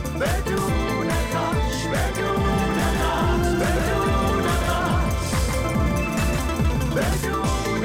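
From 2.45 s to 7.13 s, a doubled audio track appears. A second full-band copy trails the original by around 150 ms, roughly 5 dB quieter. It has no decay or room colour. It likely comes from a slower second capture path, and starts and stops abruptly.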